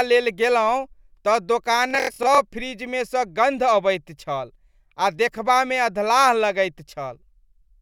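A speech clip with a Bluetooth stutter from 1.91 to 2.38 s, just after "लेल गेलहुँ तऽ" and before "फ्रिजमे सँ". Packets arrived late or not at all. The receiver kept replaying its last short slice while it waited. That repetition gives a rapid, machine-gun buzz. The gaps are scattered over about 464 ms, the longest run lasting about 93 ms. In total about 255 ms of sound is missing. When the speech resumes, it has jumped ahead.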